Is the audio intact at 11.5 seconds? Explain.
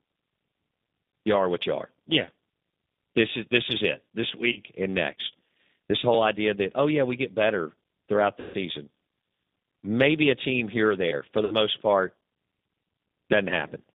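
No. From 11.45 to 11.55 s, just after "here or there for", VoIP packet loss concealed by the speech codec fills a gap of about 60 ms, consistent with three lost packets. The decoder extends its last pitch and filter into a fading buzzy tone or coloured noise. Underneath, the G.729 codec at 8 kbit/s limits the band to 200 Hz–3.7 kHz and gives the speech a plainly rough, synthetic texture.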